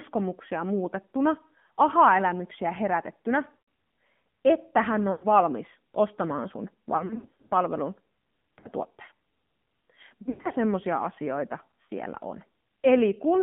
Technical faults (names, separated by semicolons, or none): AMR narrowband mobile codec; lost AMR speech frames